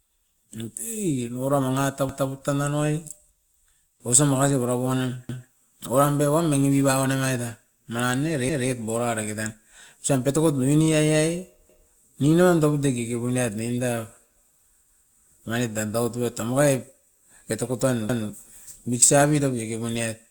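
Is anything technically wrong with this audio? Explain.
Yes, this clip has overlapping chunks. At 2.09, 5.29, 8.49, 11.69, 14.89 and 18.09 s, a 200 ms slice of the speech plays twice in a row. The audio seems to have been handled in 3-second blocks, with each new block starting 200 ms before the previous one ended, so every join repeats that stretch. You hear it as a small stutter or skip-back that recurs every 3.2 seconds of playback.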